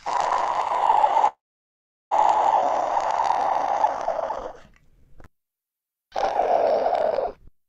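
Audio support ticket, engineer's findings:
Call audio freeze, 1.27 to 2.13 s: the sound stalls for about 0.84 s, with a brief fading tail carrying the last sound before roughly 0.74 s of silence. Likely the jitter buffer running dry while packets were held up in transit. When the stream resumes, it carries on from where it stopped, so nothing's lost, just a gap pushed into the timeline and a matching bump in delay.

Skip ahead, 2.61 to 2.64 s: an abrupt forward jump with barely any gap. Roughly 0.4 s of sound is gone, and the two sides are spliced almost directly together. Points to the jitter buffer discarding a backlog, or to packets lost while later audio was already queued.

Jitter buffer slow-down, 4.29 to 6.09 s, about 87% speed, adding around 0.25 s. Second one at 7.10 to 7.65 s, about 92% speed, adding around 0.05 s. The sound drags and stretches with pitch unchanged, which is the receiver repeating single pitch periods or slivers of quiet to rebuild its reserve. 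The first stretch is longer and deeper. The second is milder and short.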